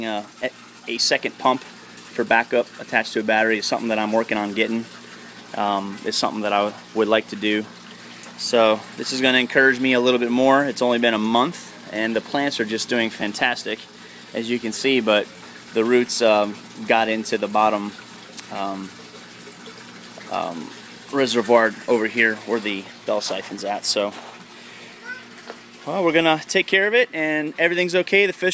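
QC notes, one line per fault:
No faults found; the signal holds steady and continuous across the whole clip.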